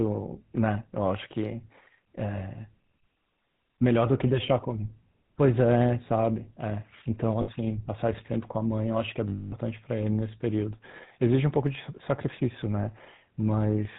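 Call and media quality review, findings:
GSM full-rate codec, throughout: buzzy, gravelly speech, nothing above 4 kHz. Sparse pulse excitation driving a vocal-tract model, consistent with 13 kbps coding.

Lost GSM frames, 7.42–7.49 s and 9.28–9.54 s: brief metallic ring. Last good frame repeated. Second gap 240 ms, fits twelve 20 ms frames.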